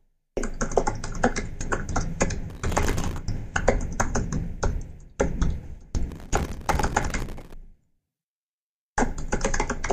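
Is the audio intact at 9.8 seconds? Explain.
Yes, at 9.8 seconds, just before the clip ends, the sound carries on without any dropout, click, distortion or other fault.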